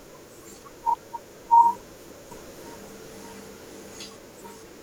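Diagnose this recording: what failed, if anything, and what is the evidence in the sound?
A doubled audio track runs from 2.31 to 4.05 s. An equally loud copy trails by about half a second and cuts in abruptly, likely from a misaligned edit. Spectrogram patterns repeat, shifted right.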